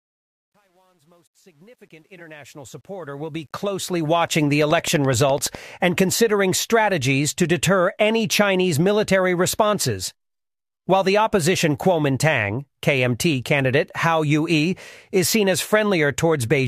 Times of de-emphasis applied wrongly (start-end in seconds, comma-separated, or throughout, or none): none